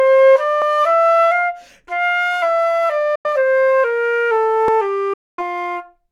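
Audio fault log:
0.62 s and 4.68 s, dropped buffer (overrun): the likely cause is the capture side failing to collect its samples before the hardware overwrote them, so a short stretch was discarded and the audio on either side was joined with no gap. About 10 ms goes missing at 0.62 s and only a few milliseconds at 4.68 s. Each splice is heard as a jump forward in the sound rather than a silence.
3.15–3.26 s and 5.13–5.43 s, Bluetooth dropout: the likely cause is audio packets reaching the headphones too late and being thrown away, so playback falls silent until good data arrives again. The first hole lasts about 91 ms and the second about 244 ms. When the sound returns it has moved on, as though it kept playing through the gap, so the missing stretch is simply gone.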